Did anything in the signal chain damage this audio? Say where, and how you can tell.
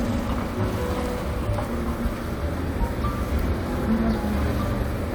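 No, nothing in the signal chain has audibly harmed these everyday sounds: level, bandwidth and timing hold steady, and no stage leaves a mark.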